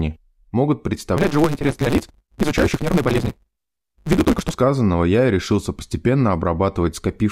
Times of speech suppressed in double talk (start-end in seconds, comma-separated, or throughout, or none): none